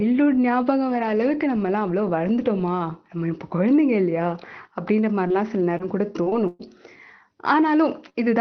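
From 5.27 to 6.61 s, repeated packet loss strikes the speech: five separate gaps where packets went missing or arrived too late, the longest 117 ms. Each time, the receiver extended the last sound to cover the hole, filling about 200 ms in total while roughly 200 ms of the real signal never arrived. With about 15% of that stretch concealed and the gaps falling close together, the speech turns choppy, with pieces dropped out.

At 8.09 to 8.16 s, a short burst of packet loss follows. A run of packets failed to arrive in time, and the receiver stretched the preceding sound over the gap for about 48 ms, fading it as the gap continued, before resuming later in the signal. About 40 ms of the original audio is simply gone, heard as a brief held buzz or fading hiss just before the clip ends. Both faults sit on top of the call codec's narrowed band, which stops near 6 kHz and fits a low Opus bitrate of around 20 kbps.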